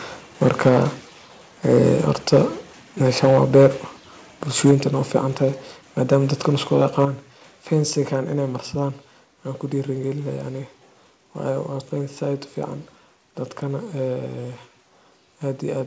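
The loudest syllables crackle with a harsh, flattened edge at 0.43–0.83 s, 1.69–1.92 s, 2.33–2.42 s, 3.23–3.67 s, 4.55–4.73 s and 6.82–7.05 s. That's likely microphone overload: peaks push about 2 to 8 dB past the converter's ceiling, so their tops get sheared off. The input level then audibly drops in single steps at 0.69 s, 4.71 s and 7.05 s, by about 3, 4 and 6 dB. This is likely the call software stepping the microphone volume down during or right after a clipped burst, so voice and background dip together.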